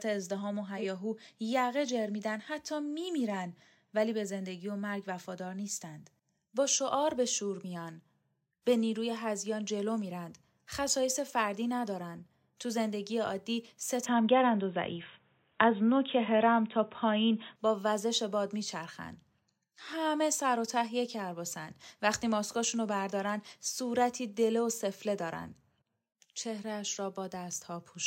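Speech, with two faults. At 0.77 to 0.84 s a corrupt frame is decoded. Flipped bits in a single compressed frame are played anyway, so energy lands at the wrong frequencies. It comes out as a short blip peaking around -25 dBFS. From 14.06 to 17.56 s the sound turns dull and boxy, with nothing above 3.8 kHz. The level shifts by about 5 dB. A faint new noise floor appears, roughly 45 dB below the signal. There is no gap at the change. The likely cause is an input switched to a poorer device.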